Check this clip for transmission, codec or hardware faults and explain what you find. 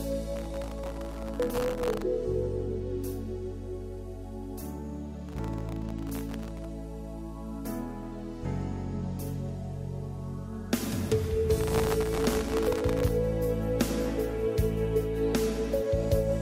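There's processor overload crackle in three bursts: 0.36 to 2.02 s, 5.29 to 6.65 s, and 11.60 to 13.08 s. The processor keeps missing deadlines on very short buffers, each well under a millisecond. Every miss replays a scrap of old audio with hard edges, something like 150 times in the first and last bursts and around 70 in the middle one. You hear that as a gritty tearing crackle riding on the sound, and it stops once the load eases.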